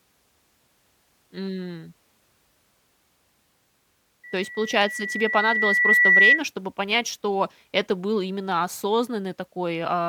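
From 4.23 to 6.43 s there's loudspeaker feedback squeal: the mic catches its own speaker, and a 2 kHz tone swells over about two seconds to roughly 10 dB above the speech.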